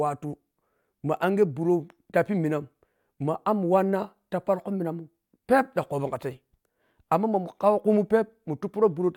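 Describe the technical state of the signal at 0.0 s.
At 0.0 s the speech signal is intact, with no audible fault at that moment.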